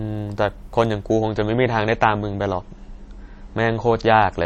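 From 1.09 s to the end, the adaptive stream drops to a lower bitrate: treble abruptly cuts off at 8.3 kHz without a gap, which fits MP3 falling from 128 to 32 kbit/s.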